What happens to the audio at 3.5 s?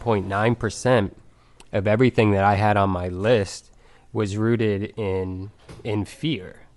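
A breathy, grainy edge runs through the speech at 3.5 s, as it does across the whole clip, and the damage is plainly audible. The likely cause is Bluetooth LC3 compression, consistent with a 48 kbps setting and 10 ms frames: the codec discards much of the upper spectrum and fills the gap with noise.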